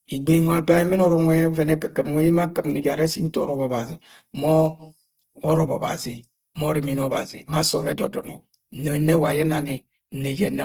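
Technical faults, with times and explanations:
Throughout, Opus compression: the speech is grainy and rough rather than swirly, likely Opus in music mode at a rate fitting about 16 kbps, refilling starved bands with noise or folded copies. A spectrogram shows noisy, smeared texture with few holes, reaching 20.2 kHz.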